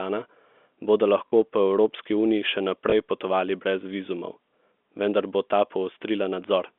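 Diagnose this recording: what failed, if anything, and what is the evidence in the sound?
Network stage: packet loss with last packet repeated. At 1.28 to 1.32 s, about 40 ms of audio, consistent with two 20 ms packets, is replayed as a short robotic stutter. A 20 ms repeat follows at 2.90 to 2.92 s, between "uniji še" and "potovali brez". Replays seldom line up with the pitch.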